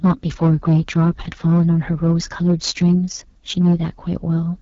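The speech in this clip was driven about 8 dB past what one stage could pass, so hard clipping flattens its peaks throughout. About 4% of the samples went past that stage's limit, and the squared-off tops throw harmonics up the spectrum. The audio has also gone through the AMR wideband (HD Voice) codec at a low rate, which fits the 8.85 kbit/s mode. Nothing remains above 7.4 kHz, and the coarse pulse-excited vocal model leaves the speech plainly rough and raspy from start to finish.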